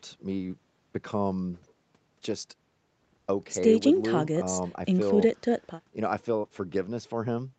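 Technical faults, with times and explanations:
No technical faults can be heard in this speech. It has passed through call microphone processing and a WebRTC call path using the Opus codec at 40 kbps, which together leave nothing above 8 kHz.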